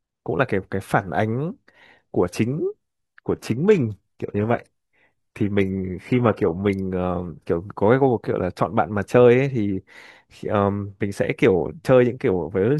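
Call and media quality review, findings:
Adaptive stream at a lower bitrate, 2.71–6.71 s: speech quality abruptly drops, codec artefacts rise, no gap. Player dropped rendition on slowed connection; fits roughly 16 kbit/s HE-AAC. Spectrogram: upper band abruptly truncated, patchy smeared highs.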